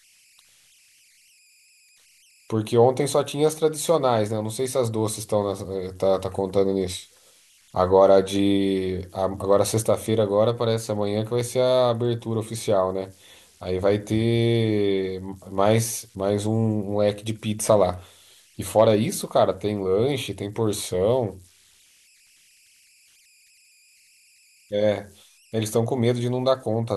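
Converter idle tones persist throughout: an undithered delta-sigma converter cycles into repeating patterns, leaving a faint whistle around 3 kHz, about 36 dB down, whose pitch is set by the offset, unlike fixed hum.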